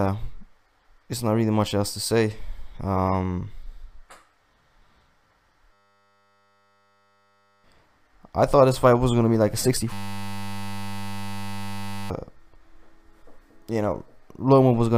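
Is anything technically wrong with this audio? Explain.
Yes. From 5.73 to 7.64 s and again from 9.93 to 12.1 s the sound collapses into a steady 100 Hz buzz. This is a system hang loop: the system froze while the hardware kept replaying one 10 ms piece of its buffer, losing about two seconds of audio each time.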